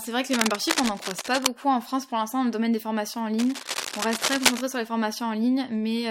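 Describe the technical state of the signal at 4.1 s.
At 4.1 s the speech is covered by cable scratch noise. It runs from 3.39 to 4.66 s, between "domaine des formations en" and "sur les". Dense, uneven scratching sits roughly level with the speech. The likely cause is a worn cable or connector shifting, its contact resistance changing rapidly.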